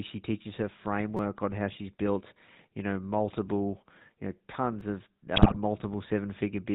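Throughout, the speech carries the gravelly, buzzy roughness of the GSM full-rate codec; a spectrogram shows nothing above 4 kHz and a coarse, pulse-driven harmonic texture. At 1.17 to 1.19 s, between "teaches her" and "on how she's built", a repeated buffer replays one roughly 5 ms slice four extra times. This fits a 256-sample buffer. It is heard as a brief buzz, and the waveform shows identical short blocks joined by hard edges. At 4.81 s, after "know multiple you know", a roughly 5 ms slice plays once more, giving a single click with one visible discontinuity. From 5.36 to 5.57 s, GSM bit errors corrupt the decoder's filter and gain values, so the speech breaks into squawks and gargling, with smeared spectral bands and sudden level spikes from frame to frame.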